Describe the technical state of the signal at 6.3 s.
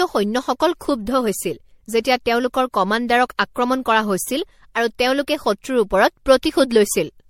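At 6.3 s the speech carries generation loss, present throughout the clip, likely from about five successive MP3 passes at a rate that fits 64 kbit/s. Each re-encode requantises on a shifted frame grid, compounding swirly, hollow artefacts and blurred attacks, with nothing above 16.5 kHz.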